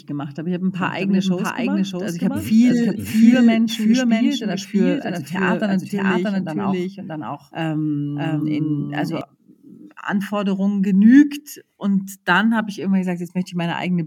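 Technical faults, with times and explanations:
0.81 to 9.21 s, doubled audio track: just after "habe ein", a second full-band copy of the speech enters about 0.7 s behind the original at roughly the same loudness, so every syllable is echoed cleanly with no decay or room colour. It starts and stops abruptly, likely because a slower capture path recorded the same signal again. On a spectrogram the harmonic patterns repeat, shifted right by a constant offset; the waveform shows duplicated envelopes overlapping.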